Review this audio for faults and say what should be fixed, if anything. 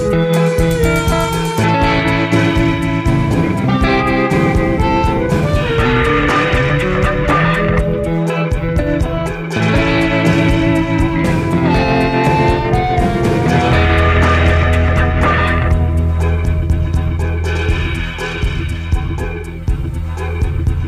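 No technical faults can be heard anywhere in the audio. Nothing needs to be fixed.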